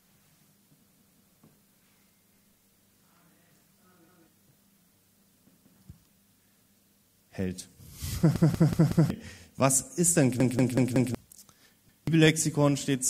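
New audio arrived late six times, so the device replayed its last 186 ms buffer (which fits an 8192-sample buffer). Each time this is heard as a repeated buffer stutter with hard joins, at 0.93, 4.09, 5.57, 8.36, 10.40 and 11.89 s. The stutters at 8.36 and 10.40 s are the longest, at about 0.7 s.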